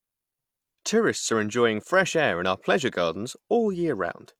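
No technical faults occur at any point in the clip, so there is nothing to describe in time order.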